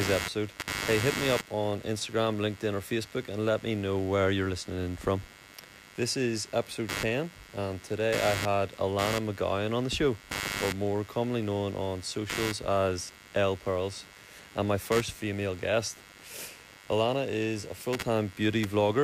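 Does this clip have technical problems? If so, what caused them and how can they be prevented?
Yes. Computer activity noise runs through the whole speech clip: a buzzing pulse at roughly a hundred per second, sitting only about 10 dB below the voice. Processor and peripheral load currents shift the ground shared with the audio circuit. Prevent it with an external, isolated interface or ground-loop isolation.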